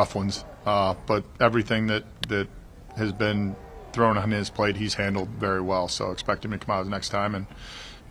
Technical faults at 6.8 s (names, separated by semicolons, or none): none